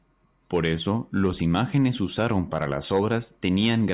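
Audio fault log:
No fault is heard in this speech clip.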